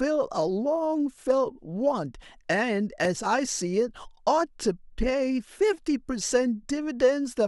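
At about 3.05 to 3.07 s there's a single loud pop, a sharp click that jumps roughly 10 dB above the speech while the talking carries straight on underneath. It's likely a sudden voltage spike, from a plug, switch or static, getting into the signal path.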